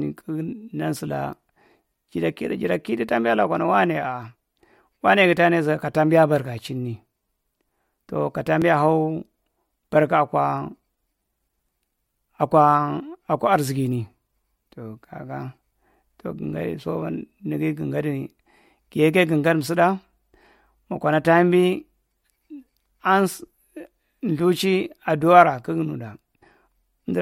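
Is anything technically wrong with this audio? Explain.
Yes. Just after "tow ka", at 8.62 s, the speech skips ahead by about 10 ms with no gap, likely a dropped buffer (overrun) that lost samples before they were read.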